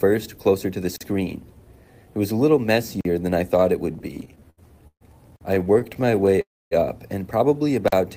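Short holes of 44 ms break the audio at 0.96, 3.01, 5.36 and 7.88 s. This is a gap between chunks: the sound arrived in pieces, roughly 2 s long, and silence was left at each join, but nothing is lost. From 3.93 to 5.03 s the audio drags and stutters through twelve brief stalls, the longest 133 ms, with about 29% of that span filled in. A second run from 5.55 to 6.39 s has sixteen tiny stalls of 16 ms or less, about 19% filled. These repeated stalls come from packets arriving late, so the jitter buffer kept running dry and the last sound was stretched until data caught up. At 6.41 to 6.73 s the sound hangs for about 0.3 s, mostly silent, then resumes where it stopped. This is a call audio freeze, likely caused by packets held up in transit emptying the buffer.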